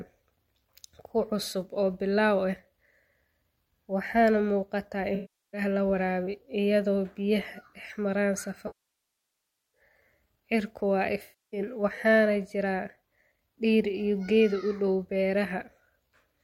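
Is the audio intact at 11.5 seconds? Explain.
No. AAC frame loss with concealment runs 11.22 to 11.60 s, just before "waxaanay jira": the decoder re-synthesises the last good spectrum, giving a smeared, noisy patch that shows as blurred, detail-free spectral bands.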